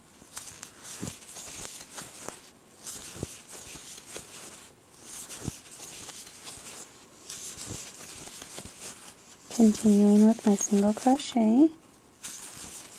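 At 11.13 to 11.17 s, short concealed packet loss: about 20 ms of the stream failed to reach the decoder in time, so the receiver invented a stand-in by extending the preceding sound before blending back into the real signal. It comes across as a brief smear or wobble.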